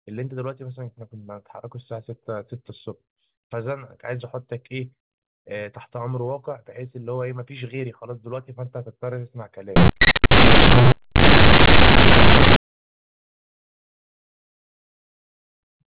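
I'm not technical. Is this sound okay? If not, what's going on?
No. From 9.76 to 12.56 s the speech becomes a loud, harsh buzz. This is companded audio read as linear: mu-law telephone sound played without decoding, so quiet parts blast.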